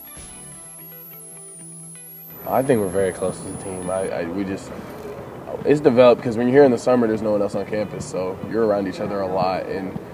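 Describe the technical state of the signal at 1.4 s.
A switching supply whistle runs from 0.00 to 4.08 s: a high tone near 10 kHz, within 9.33 to 12.34 kHz, from a power supply switching audibly, unlike low-pitched mains hum.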